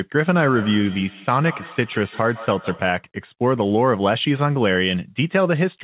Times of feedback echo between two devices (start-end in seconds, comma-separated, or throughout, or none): 0.37-3.09